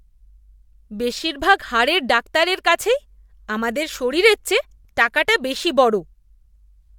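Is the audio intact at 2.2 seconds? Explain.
Yes, the speech at 2.2 seconds plays through intact, with no dropout, click, distortion or other fault audible at that moment.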